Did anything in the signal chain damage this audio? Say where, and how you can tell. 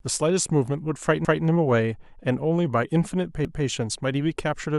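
Yes: overlapping chunks at the buffer stage replay 200 ms of speech at 1.25 s and 3.45 s, every 2.0 s, appearing as duplicated waveform blocks.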